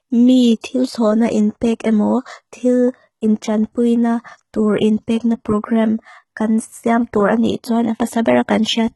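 HE-AAC compression runs through the whole of this speech recording. The sound is heavily coded, with nothing above 11.8 kHz, and the upper band carries a synthetic, metallic brightness, which fits a very low bitrate of around 16 kbps. The likely cause is spectral band replication. Only the lower spectrum is properly coded, and the treble is pasted up from copies of lower bands under a coarse envelope, so its harmonics fail to line up and s sounds turn gritty. Pre-echo appears from 0.61 to 0.64 s, just before "na inpek emo tīl". A short hiss of about 25 ms runs ahead of the onset and softens its attack. The codec spreads quantisation noise evenly across each transform block, so when a sharp attack lands late in a block, noise scaled for the loud part also spills into the quiet gap before it.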